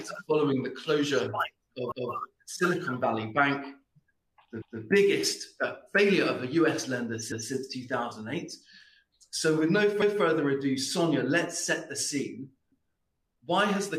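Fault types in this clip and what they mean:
overlapping chunks: each 2.5 s chunk replays the previous 200 ms, giving a stutter every 2.7 s; waveform and spectrogram show that slice duplicated at each join.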